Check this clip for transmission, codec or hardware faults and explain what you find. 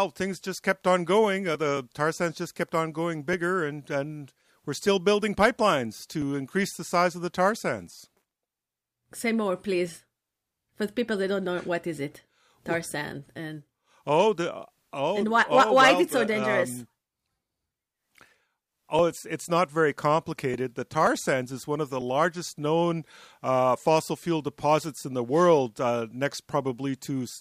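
One fault shows up in this speech clip: hard clipping from 5.42 to 5.66 s. There the signal overdrives a stage by about 4 dB, so peaks are sheared flat. That adds high harmonics, heard as brief crackle. The waveform shows squared-off tops, and the spectrogram shows broadband vertical streaks.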